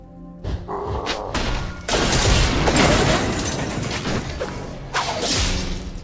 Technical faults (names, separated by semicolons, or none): wrong sample rate